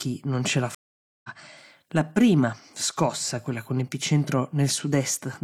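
A stream reconnect runs from 0.75 to 1.30 s, just after "non ce l'ha". The connection dropped, the player fell silent for about 0.49 s, then reconnected and started a new decoder partway through the stream. Because a live stream keeps moving during the outage, the speech picks up roughly 0.4 s further on than where it stopped, so the gap both silences the audio and skips part of what was said.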